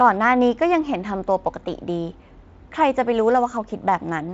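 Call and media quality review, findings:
No faults found: the speech is carried over a Speex link whose sound points to a higher-rate mode, around 34 kb/s, with content stopping near 7.7 kHz as that mode's bandwidth sets.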